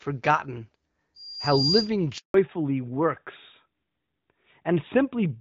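At 1.15 s a thin, piercing tone at 4.8 kHz appears and swells over about half a second until it sits a little louder than the speech, holding until 1.92 s. This is loudspeaker feedback squeal: a microphone was picking up the loudspeaker it was feeding, and at 4.8 kHz the loop gain around that path rose above one, so the tone kept reinforcing itself.

Shortly after, from 2.18 to 2.34 s, the speech cuts out completely for 160 ms, dying away almost at once rather than fading. That dead stretch is a handover gap. The phone was switching the call from one network link to another, and no speech frames reached the far end during the changeover, so whatever was said in those 160 ms never arrived and cannot be recovered.

When the sound returns at 2.34 s it is duller and rougher, and it stays that way to the end. This is a fallback to narrowband. Before the gap the call carried wideband HD Voice, with only light coding damage of the kind expected around 12.65 kbit/s AMR-WB. 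After the handover nothing reaches above 4 kHz, which points to the new link running the older AMR-NB codec at about 12.2 kbit/s.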